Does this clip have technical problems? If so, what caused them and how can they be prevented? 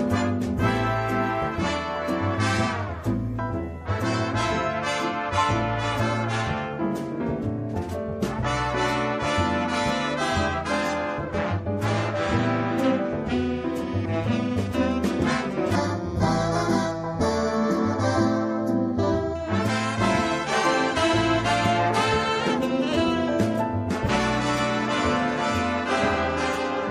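Yes. From 15.75 to 19.35 s, channel delay (comb filtering): one channel lags by a fraction of a millisecond before the mono sum, cutting notches from around 3 kHz and leaving the sound hollow. Keeping channels sample-aligned before summing to mono prevents this.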